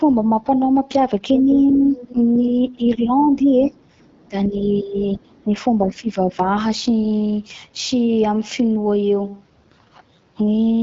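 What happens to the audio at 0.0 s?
From the very start the speech carries AMR wideband (HD Voice) codec damage, rough and raspy, which points to a low rate near 8.85 kbit/s; unlike narrowband coding, the top still reaches 7 kHz.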